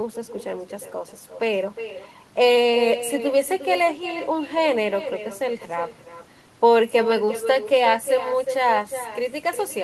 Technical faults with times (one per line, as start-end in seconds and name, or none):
0.00-9.84 echo with no canceller
7.25-7.29 short concealed packet loss